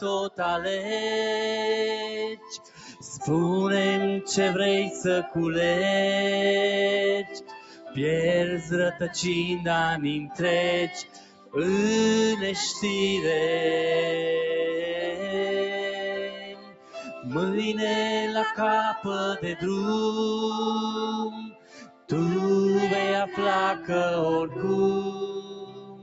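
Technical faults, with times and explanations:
Throughout: noise suppressor applied to music or sounds. A suppressor built for speech treats steady tones, ambience and decay as noise, so gain swings by about 15 dB as material comes and goes. Attacks pass while sustained parts sink, giving a pumping, thinned sound. On a spectrogram, held energy and tails fade into darker gaps behind bright onsets; the waveform envelope breathes up and down rather than following the music's own shape. The whole path stops near 8 kHz, which is expected for this call chain.
0.00–0.92 s, 1.97–3.15 s, 7.24–9.08 s, 10.24–11.56 s, 15.13–17.26 s, 18.98–19.63 s, 21.30–22.11 s, 25.10–26.03 s: sound cut by the noise suppressor. In each span, sustained or decaying sound is judged as noise and pushed down, by about 15–16 dB at worst and about 8 dB near 19 s. The affected stretches range from a fraction of a second up to about one and a half seconds around 15–17 s. 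Sudden onsets survive, so the waveform shows sharp peaks followed by truncated, collapsed tails, and the spectrogram shows sustained bands abruptly dimming mid-note.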